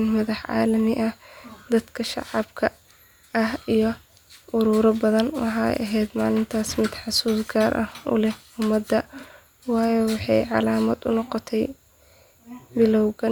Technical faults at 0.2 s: none

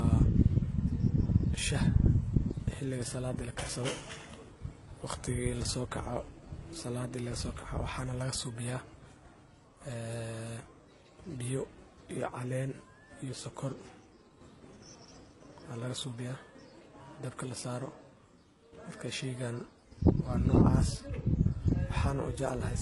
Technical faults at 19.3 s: transcoding between lossy codecs

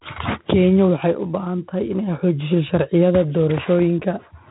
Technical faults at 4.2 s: 4-bit ADPCM compression

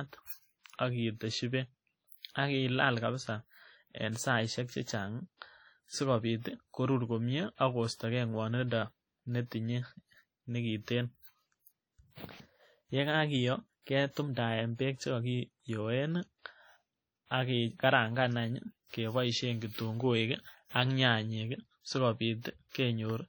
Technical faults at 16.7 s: WMA compression

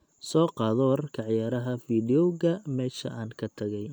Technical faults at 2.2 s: none

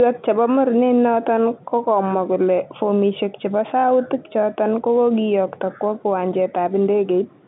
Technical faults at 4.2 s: none

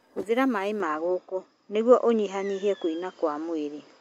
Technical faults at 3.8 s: input switched to a poorer device

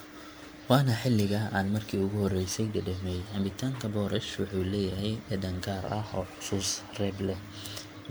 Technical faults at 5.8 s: generation loss

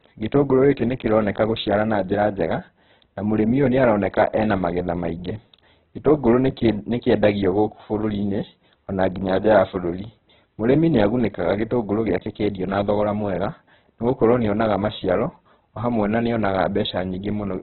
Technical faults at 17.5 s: Opus compression

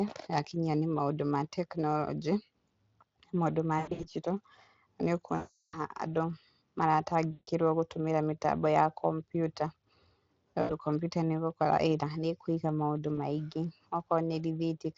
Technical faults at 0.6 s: none

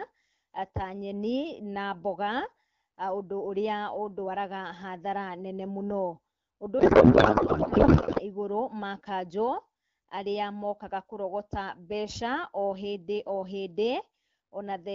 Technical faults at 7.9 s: codec payload misread

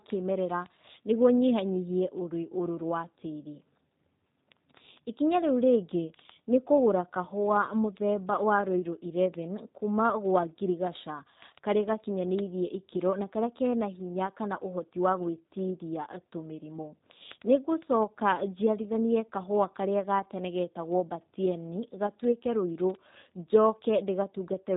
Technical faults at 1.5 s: G.729 codec; word clock ticks

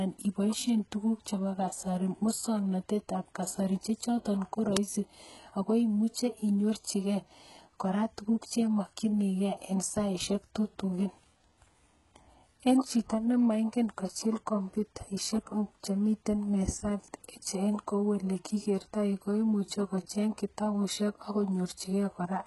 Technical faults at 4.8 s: HE-AAC compression; uninitialised buffer

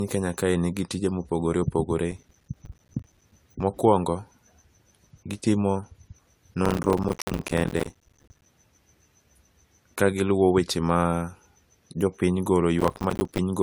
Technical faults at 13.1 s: generation loss; processor overload crackle

